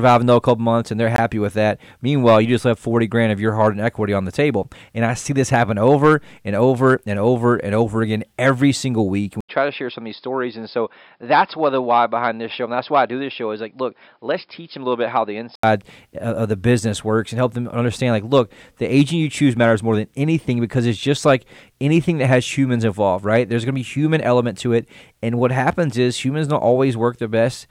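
A block of digital silence hits at 1.16 s: for about 20 ms the speech drops abruptly to silence and returns without any fade. The gap sounds like a short hole in the speech.

An apparent input switch to a poorer device runs from 9.41 s to 15.63 s. After an 80 ms silence at the switch, nothing above 5.2 kHz remains, so the speech turns dull and boxy, drops about 5 dB, and carries a faint new noise floor, likely from a different microphone or a headset call profile.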